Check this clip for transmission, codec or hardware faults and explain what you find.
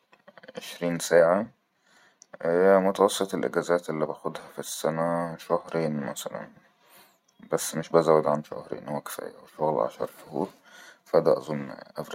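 Nothing to flag here: I listened through the speech and didn't catch any transmission, codec or hardware problem worth pointing out.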